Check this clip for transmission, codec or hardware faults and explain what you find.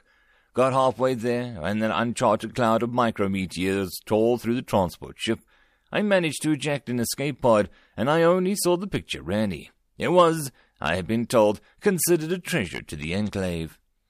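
One fault runs through the clip: clock slip clicks, from 0.26 s to 14.00 s. Two devices are likely running on separate, unsynchronised clocks that differ by around 100 ppm, so a single sample is dropped or repeated about every fifth of a second, producing around seventy evenly spaced ticks across the speech.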